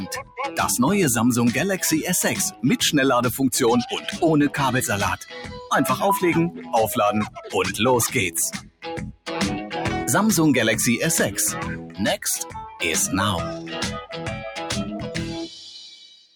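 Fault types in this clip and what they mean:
noise suppressor applied to music or sounds: The level keeps pumping and fluttering. Held sound and decaying tails sink while sharp onsets come through intact, swinging by about 10 dB. A noise suppressor designed for speech was left on and is mistaking steady content for noise.
sound cut by the noise suppressor: Eight short stretches, from 0.09 s through to the clip's end, dip well below their surroundings, by about 6 dB up to about 17 dB at 8.53 to 9.28 s. Here the suppressor judged sustained or fading sound as noise and pulled it down hardest.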